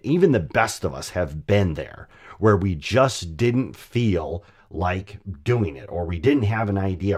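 From 4.18 s, just after "where we just didn't", the speech turns hollow and phasey through to the end, with fixed notches across the spectrum. This is channel delay (comb filtering): one channel lags about 10 ms, so summing to mono cancels evenly spaced frequencies starting near 50 Hz.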